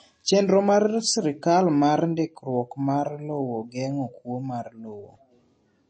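The speech sounds dull and clearly watery from start to finish, with nothing audible above about 8.4 kHz, so s sounds lose their crispness and take on a swirly, metallic edge. This is likely MP3 compression at a low bitrate, around what a 32 kbps setting would give. Short of bits, the encoder has cut the treble at a fixed point and let weak frequency detail drop in and out between frames.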